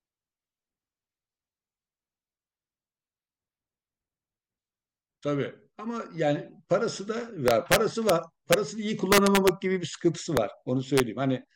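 Integer overflow strikes the speech five times, all in the second half. It starts at 7.48 s and runs to 8.10 s, with the peaks pushed about 2 dB past the limit. A brief hit follows at 8.53 s. Then comes 9.12 to 9.49 s, again about 2 dB over. Short ones land at 10.37 s and at 10.98 to 11.00 s, about 1 dB over. Each time the gain exceeds the largest integer. Instead of being limited, the sample wraps to the opposite sign. These are violent cracks, far harsher than clipping.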